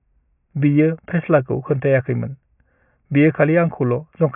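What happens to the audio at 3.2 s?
Nothing goes wrong at 3.2 s; the speech carries on intact through that moment with no dropout, click or distortion.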